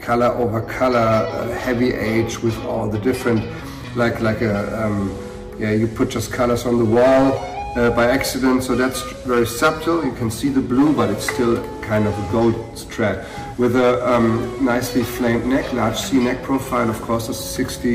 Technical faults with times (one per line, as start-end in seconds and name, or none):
0.00-17.95 hard clipping